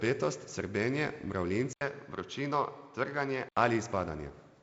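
A speech clip where, from 1.73 s to 3.57 s, the sound goes duller and boxier after an 80 ms gap. Nothing comes through above 6.6 kHz, a new noise floor sits roughly 45 dB down, and the level barely moves. That's most likely the input switched to a poorer device, under the G.722 coding that carries content up to 7.7 kHz.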